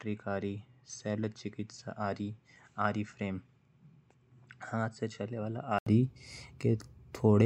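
From the start until 5.87 s the speech sounds dull and boxy, with nothing above 8 kHz, so the sibilants lose their edge. It sits roughly 10 dB quieter and carries a faint background noise of its own, far below the speech. At 5.87 s a brief gap of about 80 ms is followed by a fuller, brighter sound. This is likely an input switched to a poorer device, a narrower-band microphone or headset call profile, before the recording returned to the better input.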